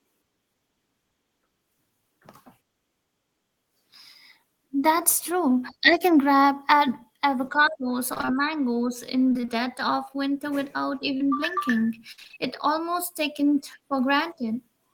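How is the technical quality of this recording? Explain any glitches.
The recording has clear network damage. Three choppy stretches and one brief dropout break up the speech.

Repeated packet loss (robotic sound) happens from 8.13 to 8.29 s (just before "mangoes in"), from 9.29 to 9.49 s (between "mangoes in" and "of winter without"), and from 12.12 to 12.38 s. In each stretch, audio went missing in a rapid string of short holes. The gaps run up to about 24 ms, and up to 57 ms in the last stretch. The receiver bridged every hole by extending the previous sound, so roughly half of each span is synthetic. That produces choppy sound with pieces missing. On a spectrogram, the harmonics turn blocky and smeared, and the waveform shows repeated copied cycles.

Short concealed packet loss occurs once, from 11.17 to 11.22 s, right after "of winter without". About 20 ms of audio never arrived in time. 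The decoder filled roughly 27 ms by continuing the last sound and then crossfading back into the real signal. It is heard as a quick smear or wobble. On a spectrogram, it appears as a thin vertical band where the fine detail briefly freezes.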